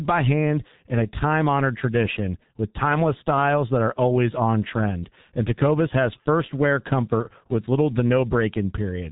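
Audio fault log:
throughout G.723.1 codec: the speech is muffled and hoarse, with nothing above 3.8 kHz and heavy codec damage. Consonants blur into one another. The roughness fits a low bitrate of about 6.3 kbit/s and long 30 ms frames, which update the voice model too slowly to track fast articulation.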